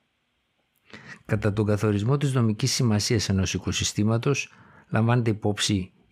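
Nothing technically wrong turns up anywhere in this short bit of speech, so there's no fault to point to and no cause to chase.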